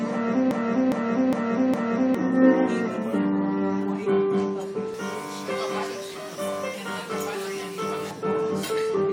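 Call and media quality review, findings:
Broken-record loop, 0.51 to 2.15 s: one 0.41 s fragment repeats four times back to back, and the audio that should have played there is lost. Likely cause is a stalled player, encoder or stream resending its last buffer.

Pre-emphasis left on, 4.94 to 8.11 s: thin, bright, sibilant top end, with treble about 11 dB hot at 10 kHz relative to 1 kHz. Shape fits a J.17 pre-emphasis boost with the matching de-emphasis never applied downstream.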